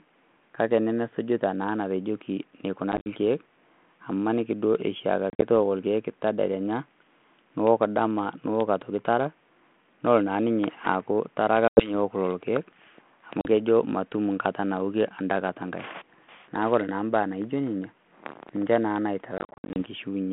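Packet loss on an ADPCM call cuts holes at 2.92–3.07, 5.30–5.42, 11.68–11.92 (after "ninye aaku tara ake"), 13.41–13.46 (before "kejo matum") and 19.38–19.78 s. Missing chunks become hard-edged silence. The decoder's predictor loses track, so speech returns slightly distorted.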